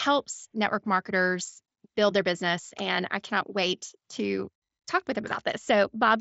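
No technical faults are audible.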